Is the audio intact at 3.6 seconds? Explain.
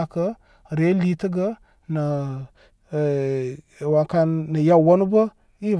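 Yes, the audio at 3.6 seconds is intact, with no dropout, click, distortion or other audible fault at that point.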